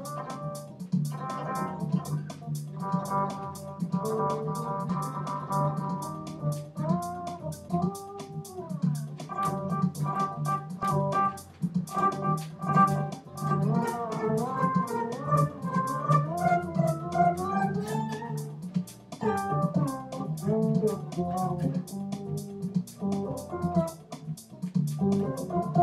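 At 4.88 s and again at 10.83 s the audio jumps abruptly ahead, dropping roughly 30 ms and then roughly 70 ms. These are compressed frames skipped: a few whole frames, missing or rejected as damaged, were never decoded, so playback lurches forward by their length.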